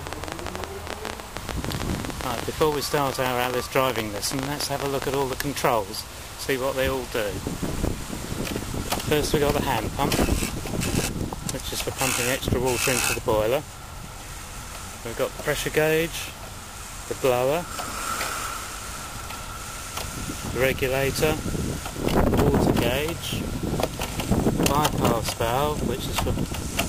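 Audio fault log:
0.07–5.34 s: train of clicks, around seventy sharp pulses at roughly 13.5 per second with uneven spacing, each standing out about 20 dB above the surrounding sound and ticking through pauses as well. The matching shape of every click and their irregular pace point to a likely cause in nearby electrical interference or a faulty connection or power supply. This sets it apart from isolated edit pops or steady codec crackle.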